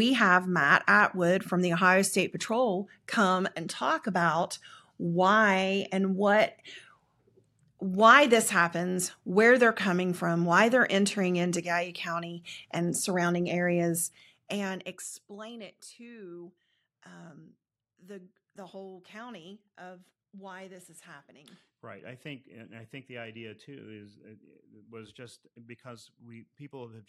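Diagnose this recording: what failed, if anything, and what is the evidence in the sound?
Zipper noise from about 13.91 to 15.37 s, starting just after "and surrounding" and ending before "it to um the", points to gain processing at the driver or buffer stage. The level drops by roughly 20 dB in unsmoothed steps, about 40 per second, which fits a gain updated once per buffer. Each jump clicks, giving a zipping texture. A spectrogram shows evenly spaced thin vertical broadband lines, and the waveform envelope descends as a staircase.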